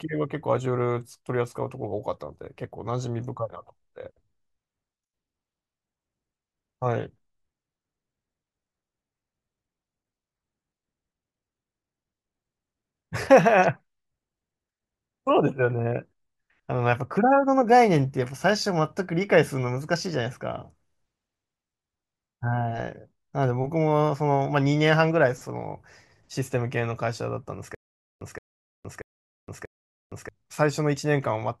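From 27.75 s to 30.29 s the speech breaks into a stutter with silent gaps: a burst of about 171 ms plays, then roughly 464 ms of dead silence, and the same burst comes back four times at a steady 635 ms period. The likely cause is a stalled player or stream replaying its last fragment on each retry. The waveform shows identical blocks separated by flat silent stretches. The spectrogram shows repeated matching slices with empty black columns between them. The audio meant for that span never plays.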